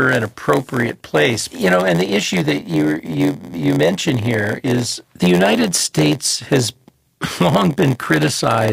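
A block size mismatch with zero padding runs through the whole clip. One stage hands over blocks shorter than the next stage reads, so each block is topped up with silence, which fits a 512-sample read block. Those tiny gaps recur at 86.1 Hz, laying a steady buzz over the speech. The inserted silence also stretches the timeline, so the speech plays at 0.938 times its normal speed while keeping roughly its usual pitch.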